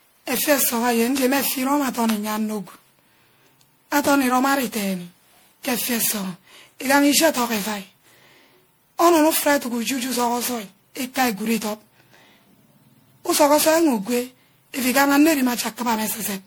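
Speech with generation loss throughout: swirly, hollow, smeared attacks, likely from about ten MP3 re-encodes near 96 kbit/s. A spectrogram shows speckled holes, blurred onsets, nothing above 20.8 kHz.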